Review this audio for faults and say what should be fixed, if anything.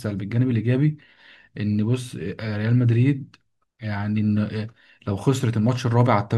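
Nothing to fix: no faults turn up anywhere in the speech recording.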